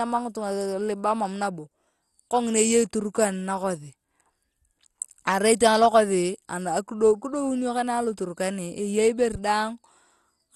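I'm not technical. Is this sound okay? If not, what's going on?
No. Throughout the recording the speech sounds dull, with a gurgling, grainy roughness on the voice. Nothing above 12.1 kHz, the top of the treble, comes through. This is likely MP2 compression, an older digital format that divides sound into narrow slices and gives each only a limited amount of detail. With too little detail to share, the highest slices are dropped and the rest become coarse and unsteady, producing that watery texture.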